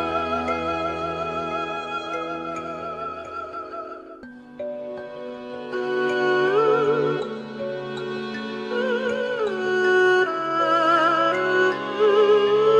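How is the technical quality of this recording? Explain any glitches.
No glitches turn up anywhere in this recording. Nothing in it calls for an explanation.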